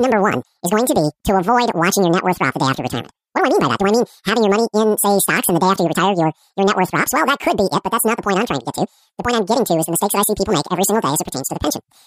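From start to finish the speech has been read two samples at a time, so each pair became one frame: it plays at double speed and sits a full octave high.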